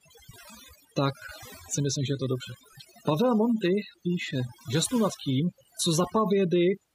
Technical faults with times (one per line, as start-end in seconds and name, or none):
0.00-6.94 overdone noise removal